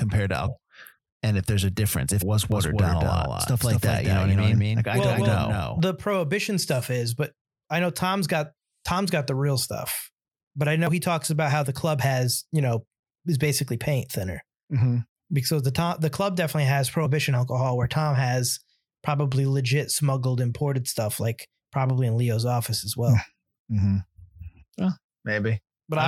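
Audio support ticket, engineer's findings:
Damaged data in the compressed speech stream. Short glitches at 0.47 s, 2.21 s, 10.87 to 10.89 s and 17.05 s. Each is a brief blip. The one at 2.21 s follows "if there's a difference". The one at 10.87 s sits between "real stuff but i" and "he talks about how". Corrupted frames. Decoder loses sync, then resyncs at the next header.

Doubled audio track, 2.52 to 5.8 s, ending before "prohibition stuff is but". A second full-band copy trails by around a fifth of a second, about 5 dB quieter. Dry, no room colour. Starts and stops abruptly. Likely a slower second capture path mixed in alongside the main one.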